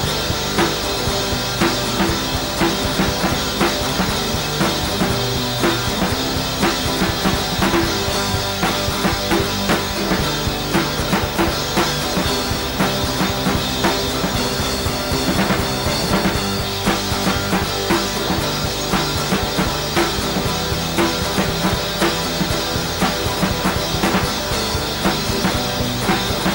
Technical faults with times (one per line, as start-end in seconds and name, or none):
0.00-26.54 video or display buzz